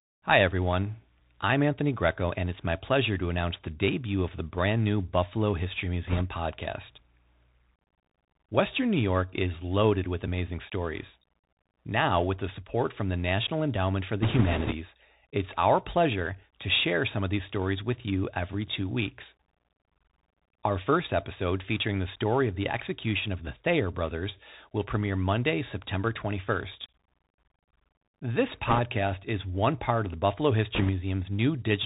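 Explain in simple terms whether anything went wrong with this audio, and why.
Throughout, the speech sounds thin and muffled, like a phone call, with scratchy s sounds and a grainy hiss underneath. That is the Bluetooth CVSD headset codec: it squeezes the sound through a narrow channel, cutting off everything above 4 kHz and roughening sharp, loud sounds.

Four short bursts of rushing, crackly noise appear at about 6.07 to 6.22 s, 14.22 to 14.73 s (just before "it's our pleasure to"), 28.68 to 28.79 s (just before "is one part of"), and 30.75 to 30.90 s. These are bit errors on a Bluetooth voice link, where a few percent of the transmitted bits were flipped. They cause crackle rather than loud clicks.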